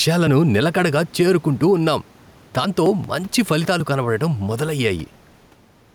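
Throughout the speech, there is a gain pumping swing of around 5 dB that squashes the sound, with room noise sitting about 32 dB below the speech. The likely cause is gain set far too high with a fast limiter clamping down on every peak.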